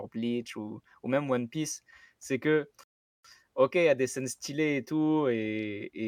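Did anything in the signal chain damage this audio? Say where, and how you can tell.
Yes, a rebuffering stall at playback: right after "c'est que" the speech drops to silence from 2.84 to 3.25 s, then resumes exactly where it stopped, adding about 0.41 s.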